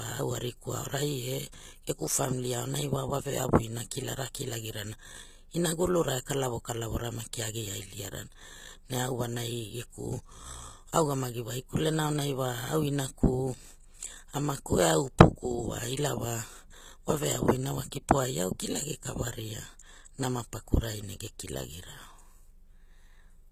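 Throughout, the treble sounds synthetic and gritty with nothing above 14.9 kHz, likely HE-AAC compression at a low bitrate near 20 kbps, rebuilding highs from copied lower bands. At 17.91 s, between "wa veavu ina wa" and "kipo ai au kilagi", an 11 ms pre-echo puts a brief hiss ahead of an attack, blurring its onset.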